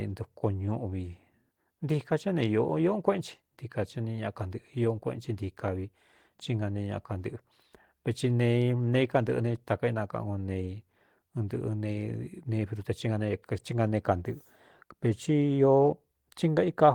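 No faults detected in this speech recording.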